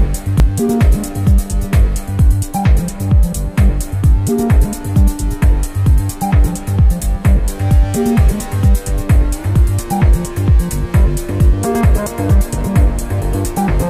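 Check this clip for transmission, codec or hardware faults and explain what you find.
Three short discontinuities occur, at 0.4 s, 5.44 s and 11.81 s. Each is an abrupt forward jump in the sound with no gap of silence, which points to a likely dropped buffer (overrun): the hardware overwrote a block of samples before the software read it, so the material on either side is spliced directly. Roughly a few tens of milliseconds go missing each time, enough to hear as a skip rather than a bare tick.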